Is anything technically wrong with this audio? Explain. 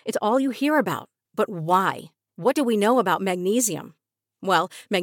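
Yes. From 0.64 s to the end, pre-emphasis was left on: the CD 50/15 µs treble boost was never undone, leaving highs about 8 dB up at 10 kHz, so the speech sounds thin, bright and sibilant.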